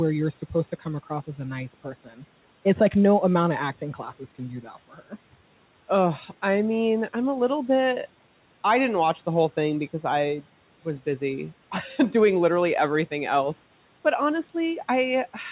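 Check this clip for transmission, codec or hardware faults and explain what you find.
The noise suppressor is clipping the speech twice. The channel itself carries nothing above 4 kHz, which fits a narrowband G.711-style call path, and the room noise sits about 27 dB below the speech.

Speech cut by the noise suppressor occurs from 1.84 to 2.23 s and again from 4.93 to 5.13 s. The suppressor misreads quiet speech energy as background and turns it down along with the noise, by up to about 10 dB. Roughly a fifth of a second in the first stretch and about a tenth in the second sound swallowed and faint, as if the talker briefly drops away.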